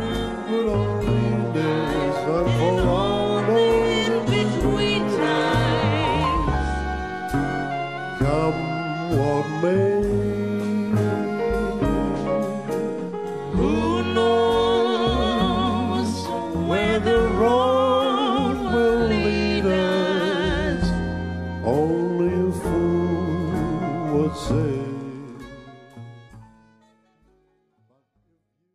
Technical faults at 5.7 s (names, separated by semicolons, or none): none